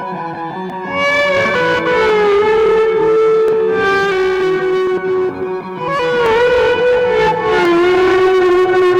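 A piece of music with a regular click running through it from 0.70 s to 7.65 s, recurring every 1.39 s for about seven events in all. This is the signature of clock drift buffer slips. The likely cause is two devices on independent clocks that disagree by a few hundred parts per million, so the buffer between them creeps until a small block of around fifteen samples is dropped or repeated, leaving a discontinuity in the waveform each time.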